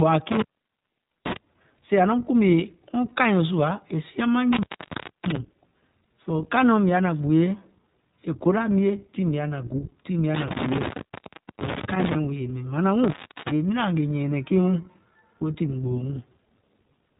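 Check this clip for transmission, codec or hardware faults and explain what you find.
Two faults are present: codec damage across the whole speech clip, and four brief dropouts.

iLBC codec, throughout: nothing passes above 3.8 kHz, and the rough, synthetic texture fits 20 ms frames coded independently at 15.2 kbps. Unlike plain band-limiting, the speech itself sounds processed.

Intermittent contact at 0.32–1.37, 4.53–5.36, 10.35–12.15 and 13.04–13.51 s: a loose connection opens for about 0.84, 0.63, 0.72 and 0.35 s. Crackle at each edge and faint hiss underneath distinguish it from clean packet-loss gaps.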